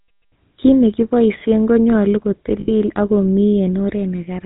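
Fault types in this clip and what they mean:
GSM full-rate codec: A vocal-tract model driven by a regularly spaced pulse excitation that keeps only every third sample, with nothing passed above 4 kHz. The damage is plainly audible across the whole clip: the speech has a buzzy, gravelly roughness and a dull, band-limited top end, a character that fits the 13 kbps full-rate coder rather than a later, cleaner GSM variant.
lost GSM frames: When frames fail, the decoder substitutes the parameters of the last good frame and repeats them at a falling level instead of producing fresh speech. Here a gap from 2.60 to 2.70 s is bridged this way, with about 80 ms of speech replaced, consistent with four consecutive 20 ms frames lost. In that gap the sound hangs as a short, rough, metallic ring before the normal coded speech resumes.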